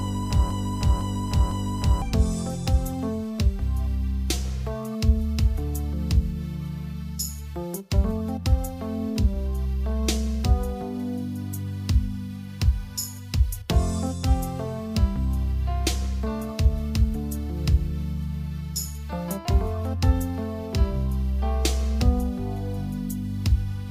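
From the start to 2.02 s, a broken-record loop plays. A 0.5 s fragment repeats exactly, back to back, three times. It is already looping as the clip opens. A stalled player or stream likely kept resending its last fragment. The audio meant for that stretch is lost.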